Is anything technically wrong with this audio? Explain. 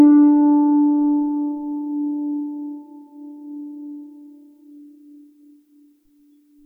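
No, nothing technically wrong turns up here, and this bit of music comes across without any problems worth pointing out.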